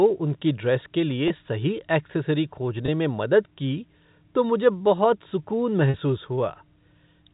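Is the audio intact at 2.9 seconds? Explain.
No. Packet loss with pitch repetition at 2.86 to 2.88 s, after "सही एक्सेसरी", refills a 20 ms gap with the last pitch cycle, heard as a brief buzzy hold rather than silence.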